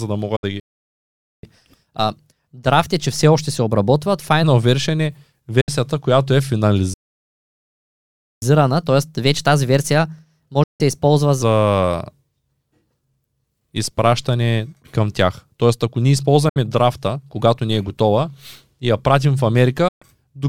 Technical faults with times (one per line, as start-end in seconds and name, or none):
0.36-0.44 digital broadcast dropout
0.60-1.43 playback stall
1.43-4.43 catch-up at higher speed
5.61-5.69 digital broadcast dropout
6.94-8.42 playback stall
8.42-11.42 catch-up at higher speed
10.63-10.81 digital broadcast dropout
16.49-16.57 digital broadcast dropout
19.88-20.02 digital broadcast dropout